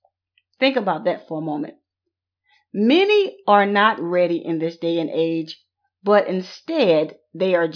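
No technical faults are audible in this speech.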